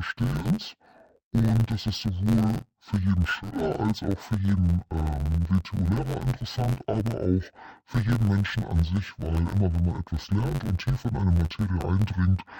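Throughout the speech, a dull, robotic buzz at about 92 Hz; interleaved audio read as planar, in 10.88 ms blocks, scrambles left and right samples without an octave drop.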